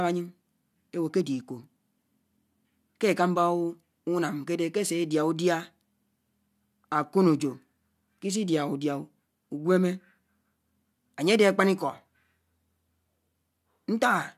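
Nothing in the speech stood out as a technical problem on listening.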